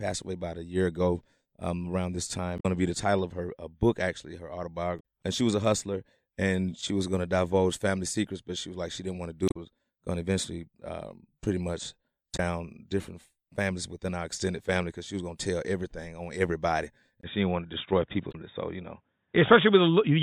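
The clip is speech with two kinds of fault. Damaged data in a compressed stream breaks the sound five times: 2.56 to 2.65 s, 4.97 to 5.01 s, 9.45 to 9.56 s, 12.33 to 12.39 s and 18.29 to 18.35 s. Each lasts between 40 and 110 ms. At these points part of the coded stream is corrupt. The decoder misreads those frames and loses sync, so it must find the next valid frame header before clean sound returns. The fifth event falls after the second fault begins. At 17.21 s the sound narrows and stays narrow to the end. Nothing is heard above 3.8 kHz from there on. A 20 ms gap marks the change. A new background noise comes in, roughly 50 dB below the speech, and the overall level stays about the same. This is likely an input switched to a poorer device, such as another microphone or a headset's call profile, with its own narrower band and noise.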